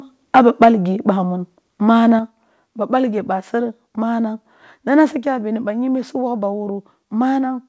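A short speech recording. From 0.35 to 0.68 s the loudest syllables carry a harsh, crackly edge: the peaks are flattened against the converter's ceiling. This is microphone overload, likely from input gain set about 7 dB too hot, with a few percent of samples clipped. It differs from codec distortion because it follows the loudness of the speech and adds odd-sounding harmonics only on the peaks.

At 0.64 s, right at the end of that distorted stretch, the whole signal drops by about 2 dB in one instant. The same happens at 2.19 s, by about 5 dB, and at 5.25 s, by about 3 dB, just before "bini ba yimbi si". The speech and the background fall together, which marks these as microphone volume stepped down. The likely cause is the call software cutting the device's input gain after finding the microphone too loud. A gain rider or compressor would ramp the level smoothly. These drops are abrupt steps that add no distortion.

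Throughout, the band stops at 8 kHz, which fits a G.722 call path.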